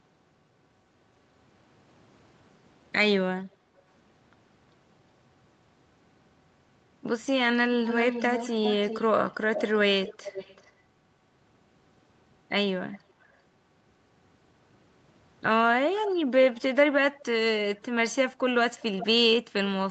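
Echo leak at 7.87–10.71, 12.92–13.33, 16.06–16.11, 17.19–17.25 and 18.8–19.05 s: a copy of the speech returns about 380–410 ms late, likely from a far-end loudspeaker that the echo canceller didn't fully cancel. It is loudest in the first, longest stretch.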